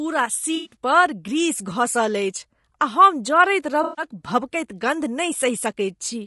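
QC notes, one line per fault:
Throughout: low-delay AAC compression. The speech sounds rough and grainy, with noise between harmonics and a thin, synthetic top band. This is likely AAC-ELD at around 32 kbps, whose short frames resolve pitch harmonics poorly and leave too few bits for clean detail.
0.55–0.75 s and 3.83–4.05 s: AAC frame loss with concealment. About 120 ms goes missing in the first patch, scattered across 160 ms with the longest gap near a tenth of a second. About 140 ms goes missing in the second. The decoder fills each gap from the last good spectrum, giving smeared, noisy, phasey patches.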